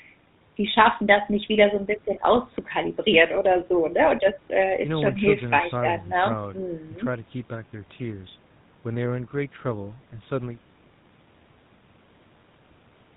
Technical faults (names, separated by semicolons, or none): GSM full-rate codec